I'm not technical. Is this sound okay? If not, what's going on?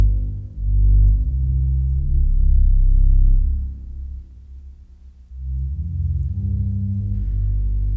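Yes, this sound is okay: nothing in it points to a technical problem with the recording or playback.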